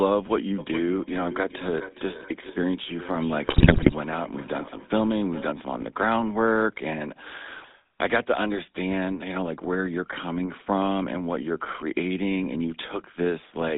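The whole clip of speech passes through the GSM full-rate codec. The band runs from 200 Hz to 3.7 kHz. The voice is buzzy and gravelly. The excitation is rebuilt from sparse regular pulses, so fine detail is lost. The roughness fits a 13 kbps GSM full-rate stream.

From 0.58 to 5.59 s there is feedback echo between two devices. One device plays the other's microphone feed, and that microphone catches it again. The speech returns roughly every 0.4 s, thinner and ringing. The loudest repeat sits about 15 dB below the speech.

GSM bit errors hit from 3.44 to 3.93 s, inside the echo stretch. They strike again from 7.56 to 7.71 s. Corrupted filter, pitch and gain values reach the decoder. The spectrum bends and the level jumps frame after frame while each patch lasts. The voice squawks, pops and gargles.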